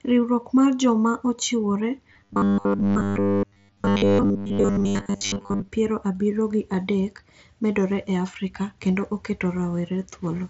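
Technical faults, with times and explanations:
2.1 to 5.68 s, robotic sound from repeated short buffers: the speech turns into a rigid metallic buzz locked at 100 Hz that only loosely tracks the syllables. The likely cause is audio arriving too slowly, so the playback side keeps re-sending its last short buffer. A 100 Hz buzz fits a buffer about 10 ms long. Most of the span, roughly seven parts in ten, is repeated material, and the real audio in those gaps is skipped.
2.88 s and 5.14 s, concealed Bluetooth headset packet loss: about 15 ms of audio is missing at each point, which fits a pair of consecutive lost frames. The receiver covers each gap by continuing the waveform from a well-matching stretch of the audio just before it. The patch is a brief held, slightly buzzy fragment, then a faint warble where genuine audio resumes. Both losses fall inside the robotic span. Through the 61 kbps mSBC link, the speech stays band-limited to 8 kHz with light graininess.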